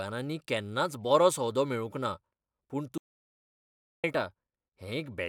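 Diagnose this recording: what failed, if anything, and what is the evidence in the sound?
An audio dropout to silence runs from 2.98 s to 4.04 s: the speech stops abruptly, about 1.06 s of digital silence follows with no room tone, and the speech resumes mid-flow. The input was likely lost at the device or link while the recorder kept writing zeros.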